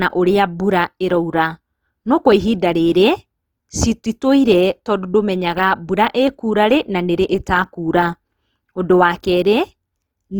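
A speech recording that carries plainly audible Opus compression from start to finish, likely from encoding in Opus's CELT music mode at a low rate, which fits about 24 kbps. Starved bands are refilled with folded or noise-like energy, so the voice comes out rough and grainy rather than swirly. On a spectrogram the upper bands look speckled and noisy instead of showing clean harmonics, with few empty holes, and full bandwidth reaching a sharp edge near 20.2 kHz.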